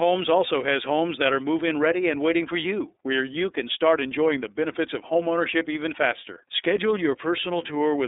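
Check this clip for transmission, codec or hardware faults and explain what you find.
The iLBC codec affects the whole clip. Each 30 ms frame is coded independently, consistent with the 13.33 kbps mode. The speech is confined to roughly 300 Hz–3.7 kHz, with nothing above 3.8 kHz, and sounds plainly rough and synthetic.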